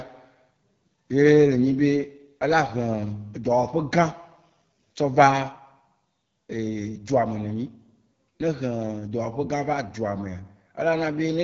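From start to end, the speech carries AMR wideband (HD Voice) codec damage, and it is plainly audible. The codec models the vocal tract and drives it with pulses up to 6.4 kHz. Above that it adds shaped noise in place of real detail. Nothing is present above about 7.2 kHz. The voice sounds rough and raspy throughout. That grain fits the codec's second-lowest rate, around 8.85 kbit/s.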